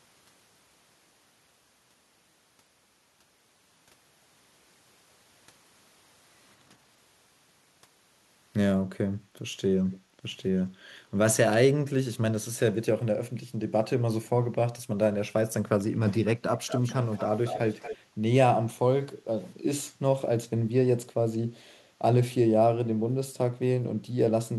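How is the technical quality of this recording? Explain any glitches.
The recording has two kinds of call-path glitch: echo leaks and brief background dropouts. Both cluster around 10 s and 17 to 18 s.

Echo leak first. A faint delayed copy of the speech appears at 9.91 to 9.98 s, about 266 ms late and very quiet. It returns much stronger at 16.57 to 16.94 s, 17.13 to 17.25 s and 17.45 to 17.97 s, about 235 ms late. The likely cause is a far-end loudspeaker whose echo canceller let some of the speech back through.

Background gated by the echo canceller follows the first and last echo bursts. At 10.03 to 10.17 s the room sound dips by about 7 dB for roughly 150 ms. At 17.97 to 18.19 s it drops about 14 dB for roughly 200 ms. The canceller pulled the microphone down hard, then released it.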